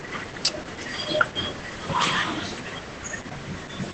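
Speech throughout, carrying heavy Opus voice compression artefacts across the whole clip. Nothing is present above about 8.7 kHz, the wideband ceiling that the codec imposes. The excitation is coded so coarsely that the voice sounds muffled, hoarse and faintly robotic. That combination points to the SILK linear-prediction coder working near 10 kbps, with too few bits per frame to rebuild the fine structure of the voiced sound.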